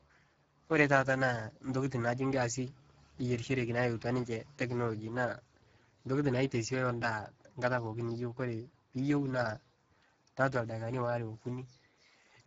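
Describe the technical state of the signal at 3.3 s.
At 3.3 s, as throughout the clip, the speech passes through the Speex codec at a low setting, which fits a rate near 10 kbps. Too few bits for the excitation leave the speech plainly noisy and hoarse, with nothing above 7.7 kHz.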